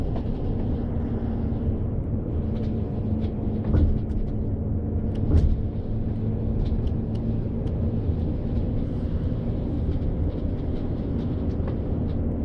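No technical faults occur at any point in the audio.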